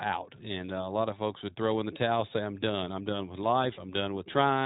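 From start to finish the speech sounds boxed-in and slightly rough, with a synthetic edge and no brightness, because nothing above about 3.8 kHz survives. This is the iLBC codec at work: a narrowband VoIP coder that fits a 15.2 kbps rate with 20 ms frames, coding each frame's excitation independently of the previous one. The coding damage is plainly audible, leaving the speech clear but noticeably grainy and artificial.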